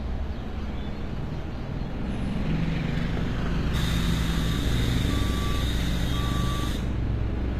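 A clip of sounds with HE-AAC compression throughout, likely from a low-bitrate encode around 24 kbps, where the treble is rebuilt from copied lower bands, so upper detail sounds gritty and metallic, and nothing remains above 15.5 kHz.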